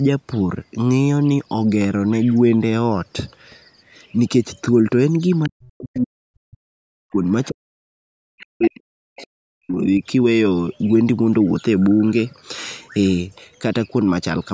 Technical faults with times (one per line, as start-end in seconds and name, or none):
5.43-5.49 other side's voice leaking through
5.47-6.57 speech suppressed in double talk
5.98-6.03 other side's voice leaking through
6.94-10.03 speech suppressed in double talk
7.44-7.49 other side's voice leaking through
8.38-8.70 other side's voice leaking through
9.16-9.24 other side's voice leaking through